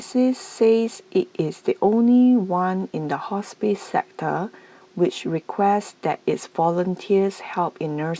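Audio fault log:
No faults heard anywhere in this speech recording.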